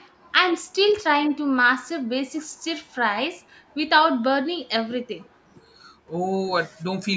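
A loudspeaker-side echo canceller likely let some of its microphone pickup through in this speech clip, causing echo leak from 0.00 to 0.11 s and again from 5.19 to 5.30 s: a very faint delayed copy of the speech, trailing about 226 ms behind and sitting roughly 35 dB down.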